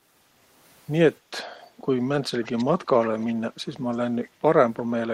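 Echo leak at 2.44–2.65, 2.83–3.33, 3.92 and 4.23 s: faint scraps of speech repeat 346 ms late, unlike reverb's smooth tail, likely from an echo canceller letting loudspeaker pickup through.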